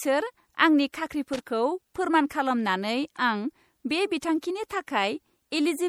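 From the start and throughout the speech, the audio carries plainly audible coding damage: a watery, swirling texture where weak frequency components drop in and out between frames, with smeared attacks. This is likely MP3 compression at a rate that fits about 64 kbps.

From 1.33 to 1.50 s, an irregular burst of crackle and scratching lasting about 0.17 s cuts across the speech. This is loose connector crackle: a worn or dirty contact making and breaking rapidly, chopping the signal on and off.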